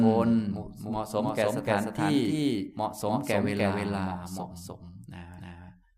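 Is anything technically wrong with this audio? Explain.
Yes. Throughout the speech, a doubled audio track: a second, equally loud copy trails roughly 0.3 s behind, likely from a slower capture path. The waveform and spectrogram show every onset repeated at that fixed offset.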